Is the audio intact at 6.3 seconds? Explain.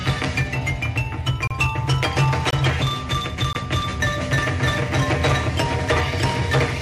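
Yes, the audio is intact at 6.3 seconds, with no dropout, click, distortion or other fault to be heard there.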